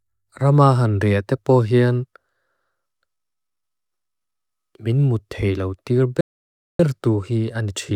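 At 6.21 s the speech halts for about 0.58 s until 6.80 s, a playback stall, likely from the player running short of data. It's a clean, lengthy silence, unlike a brief clicky dropout.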